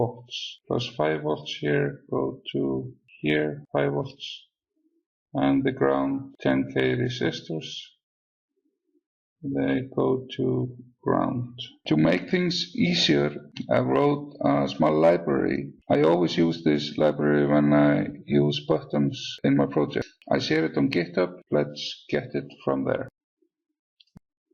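No technical faults can be heard anywhere in the recording; the signal runs without any interruption or disturbance.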